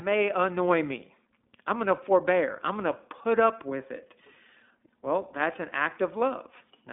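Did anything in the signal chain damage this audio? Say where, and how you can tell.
Yes, at the codec stage, for the whole clip. The speech carries the iLBC codec's signature: nothing reaches above 3.8 kHz, and the band sits between 250 Hz and 3.6 kHz, giving a thin telephone-line sound. The damage is plainly audible as a rough, slightly synthetic texture. iLBC codes each frame's excitation independently, with framing that fits its 20 ms, 15.2 kbps mode, so voiced sounds lose smoothness between frames.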